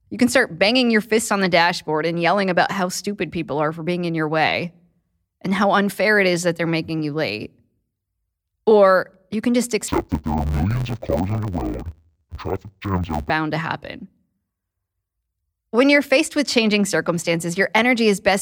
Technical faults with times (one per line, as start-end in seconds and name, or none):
9.88-13.31 interleaved audio read as planar